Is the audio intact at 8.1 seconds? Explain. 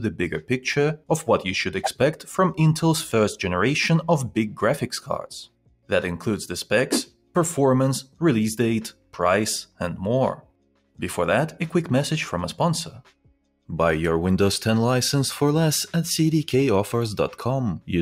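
No. From 8.04 to 8.21 s the sound is cut by the noise suppressor. That span sits inside a noise suppressor applied to music or sounds, one tuned for speech, which mistakes sustained, steady content for background noise and pulls it down. Here it clamps harder than the roughly 5 dB swing heard across the clip, dropping the level by about 11 dB at its deepest. For roughly a sixth of a second the sustained part sinks, leaving a brief hollow dip.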